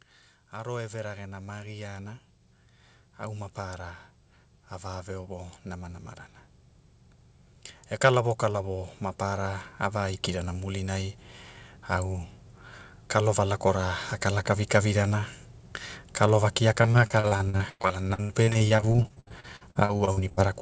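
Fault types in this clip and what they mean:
Automatic gain rising: The automatic gain control judged the incoming level too low and increased its gain step by step, so speech and background noise grow louder together instead of the speech alone changing. It happens twice: from 0.52 to 2.28 s the level climbs by about 5 dB, and from 8.01 to 11.21 s by about 6 dB, the second rise being slower and spread over more than three seconds.
Repeated packet loss (robotic sound): From 16.82 to 20.39 s, audio data repeatedly failed to arrive in time, and each gap was filled by stretching the last received sound. Dozens of short holes follow one another, the longest about 102 ms, so roughly a third of that stretch is patched sound. The speech turns choppy, with small pieces missing throughout, all within the 8 kHz bandwidth of the call codec.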